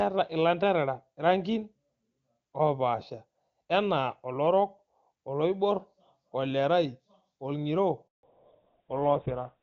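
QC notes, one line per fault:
8.07 to 8.23 s, handover gap: speech cuts out for 160 ms while the call switches networks; waveform shows a flat silent gap, spectrogram a blank vertical strip.
8.23 s to end, fallback to narrowband: HD Voice gives way to GSM full rate, so everything above 4 kHz disappears; spectrogram shows a hard ceiling, sound turns dull and rough.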